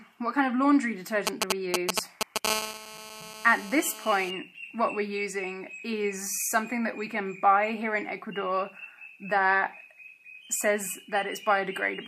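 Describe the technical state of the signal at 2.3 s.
At 2.3 s the signal is hit by GSM signalling bursts: a nearby 2G phone is exchanging short groups of radio bursts with its network, and the audio circuitry rectifies that RF into the signal path. Between 1.27 and 2.47 s this surfaces as a galloping dit-dit-dit of brief buzzes at about 217 Hz, sitting roughly 5 dB above the wanted audio.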